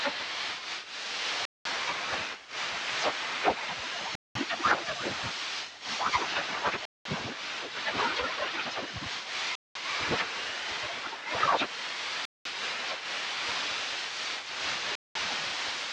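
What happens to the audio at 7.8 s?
Nothing goes wrong at 7.8 s: the sound runs through that moment intact, with no dropout, click, glitch or other fault.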